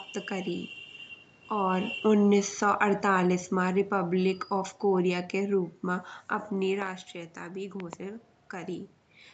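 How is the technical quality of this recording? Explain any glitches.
The recording has two kinds of fault: a gradual gain drop and a pair of double pops. The speech comes through a call path whose content stops around 8 kHz, consistent with an Opus codec at a moderate bitrate.

Automatic gain falling runs from 1.52 to 5.67 s and ends just before "मा अपनी". The gain control judged the input too loud and eased it down by about 7 dB. Speech and background sink together. On a waveform, the envelope tapers steadily across that stretch.

Loud pops come in two events, at 6.82–6.89 s just after "मा अपनी" and at 7.80–7.95 s. Each event is two sharp clicks, roughly 15 dB above the speech, likely from a voltage step such as a plug, switch or static discharge. They show as thin full-height vertical lines on a spectrogram and as paired spikes on a waveform.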